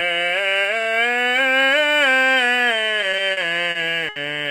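Music, with repeated stalls (stutter) between 3.01 and 4.18 s. Over that stretch the playback hitches six times, the longest hold lasting 70 ms, adding up to about 180 ms, or roughly 15% of the span. Packets arrived late or slower than they were played, so the jitter buffer kept emptying and the receiver stretched the last sound until data resumed. Nothing is lost, but the passage drags. A spectrogram shows brief frozen, horizontally smeared columns; the waveform shows short repeated, fading segments.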